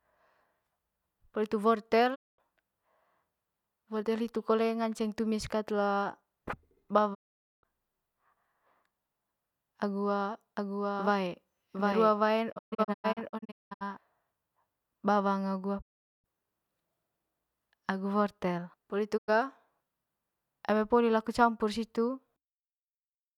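Digital broadcast dropouts mute the speech with quick 20 ms fades at 2.14, 7.13, 12.51 (scattered short holes until 13.83), 15.80 and 19.16 s, just after "poli hitu". The receiver silenced failed frames, so that audio is lost, not smeared or repeated. From 10.57 to 13.97 s, a doubled audio track runs a copy about 5 dB quieter, about 0.7 s behind, likely from a second, slower capture path. It has no decay or room colour and starts and stops abruptly, unlike reverb.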